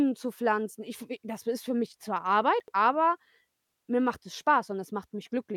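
At 2.6 to 2.72 s there are chunks out of order. One 40 ms chunk of the speech plays two chunks late, after the audio that should follow it. Nothing is missing, but the sequence is scrambled. It sounds like a brief jumbled stutter with three hard joins.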